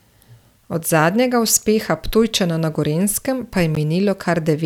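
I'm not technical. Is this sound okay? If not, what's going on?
No. At 3.75 s there's a block of digital silence: the speech cuts out abruptly for 13 ms and returns without fading, making a brief tick.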